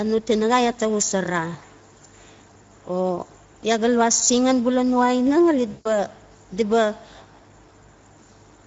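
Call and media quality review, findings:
Speex codec, throughout: speech hoarse and noisy, plainly degraded; bitrate points to roughly 16.8 kbps. Too few bits for the CELP excitation, so the waveform is coarsely approximated and the high band is a thin noise-like fill.

VoIP packet loss concealed by the speech codec, 5.71 to 5.92 s, just before "di ba": about 140 ms of lost audio. The decoder stretches the last pitch and filter into a fading sound, and the speech stays weak briefly after it resumes.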